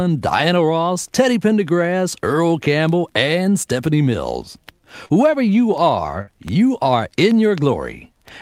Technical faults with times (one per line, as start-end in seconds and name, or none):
5.05-5.11 short concealed packet loss
6.21-6.29 burst of packet loss